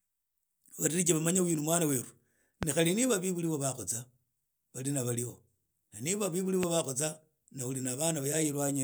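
This speech clip carries two loud pops, each a single sharp thump lasting a couple of hundredths of a second and standing roughly 20 dB above the speech, which carries on underneath. The first falls at 2.63–2.65 s, right after "uyu ni mwna weru" and before "khali niba bebuli". The second comes at 6.63–6.66 s, between "na niba bebuli" and "bakhosana na uli". Each is likely a brief voltage pulse from a plug, switch, static discharge or driver glitch entering the signal chain.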